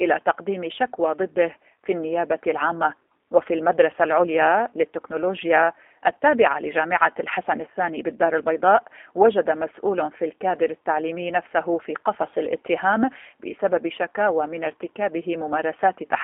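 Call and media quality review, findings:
G.729 codec throughout the speech: rough, synthetic texture, plainly audible; band limited to 300 Hz to 3.4 kHz. Fits an 8 kbit/s G.729A leg, which resynthesises speech from a vocal tract filter, pitch predictor and sparse pulses per 10 ms frame.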